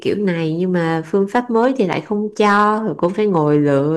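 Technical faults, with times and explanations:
1.35 to 1.93 s and 2.40 to 3.78 s, hard clipping: the speech is driven about 4 to 5 dB past what the stage can pass, so peaks get sliced flat and crackle with harsh upper harmonics.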